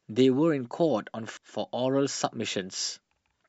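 A short speech recording with one glitch: at about 1.37 s there's a quick glitch, which is damaged data in a compressed stream. A stretch of the encoded bytes got corrupted, so the decoder couldn't make sense of the frame at that spot, lost its sync and had to hunt for the next valid frame header before carrying on. That brief scramble while it recovers is the glitch you hear.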